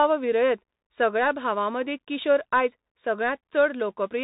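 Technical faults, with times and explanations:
Throughout, Bluetooth CVSD headset codec: the speech sounds boxed-in and narrow, with nothing above 3.8 kHz, s sounds turned scratchy, loud bright moments crunching, and a grainy hiss running under everything. The damage fits a 64 kbps CVSD link, where each sample is reduced to a single up-or-down bit with an adapting step size. Fast, loud high-frequency movement outruns that step and distorts, and the constant small stepping leaves the granular noise bed.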